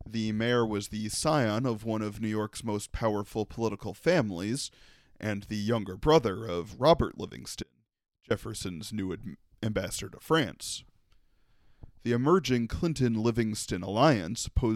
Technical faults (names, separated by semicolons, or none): audio dropout to a faint residue